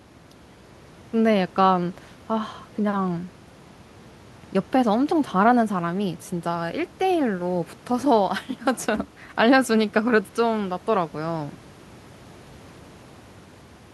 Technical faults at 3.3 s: clock slip clicks

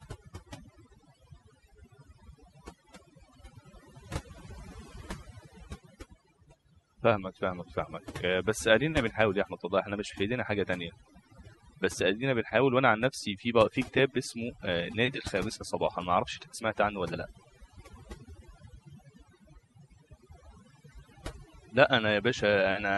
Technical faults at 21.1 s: overdone noise removal

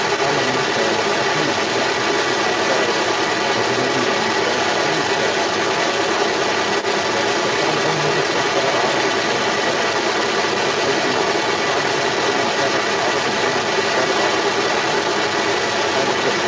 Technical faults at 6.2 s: other side's voice leaking through

